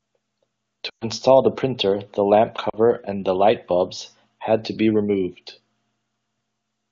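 At 0.89 s, just before "the printer the lamp", lost AMR speech frames leave a gap of about 120 ms, which fits six 20 ms frames. Over the wideband codec the decoder repeats the last good pitch and vocal-tract settings at falling gain, so the sound drops to near silence within two frames before resuming weakly at 1.05 s. A shorter loss of two frames from 2.69 to 2.75 s, between "the printer the lamp" and "and light bulbs had", produces a brief drop to near silence.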